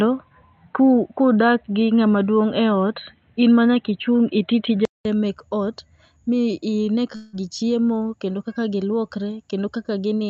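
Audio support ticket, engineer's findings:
Input switched to a poorer device, 0.0 to 5.05 s. Audio dull and boxy, nothing above 4.1 kHz. Faint background noise, roughly 50 dB down. Level shifts by about 5 dB. A 0.2 s gap, then fuller sound before "mek ot mi". Likely a headset call profile or a fallback microphone.

Long network dropout, 7.15 to 7.36 s. About 180 ms of audio missing. The receiver stretched the last sound over roughly 175 ms as a fading buzz. Audio resumes further on, with the lost part gone. Likely packet loss on the Opus call path.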